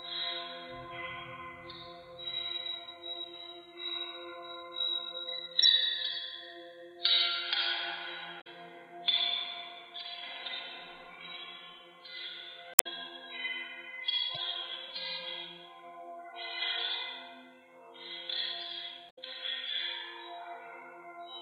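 At 5.63 s there's a quick blip, then longer glitches at 8.37 to 8.47 s, 12.71 to 12.87 s, 14.35 to 14.37 s and 19.07 to 19.19 s. All five are damaged data in a compressed stream. Bits of the encoded file got corrupted, so the decoder choked on those frames, lost its place and had to hunt for the next valid header. Each one comes through as a short chirp, squawk, click or hole cutting across the sound.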